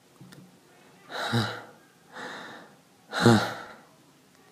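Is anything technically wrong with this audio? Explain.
Yes. From 3.66 to 3.73 s, frames are out of order. Two neighbouring blocks of about 32 ms each were decoded in swapped order, so the stretch plays with its halves exchanged. It sounds like a brief garbled flutter. No time is lost.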